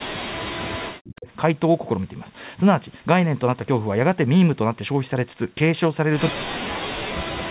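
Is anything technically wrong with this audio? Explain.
Yes. Speech suppressed in double talk appears from 0 to 1.27 s and again from 6.31 s to the end. The echo canceller was likely unable to separate this talker from loudspeaker echo while both sides spoke, so it turned the speech down, with drops of about 40 dB.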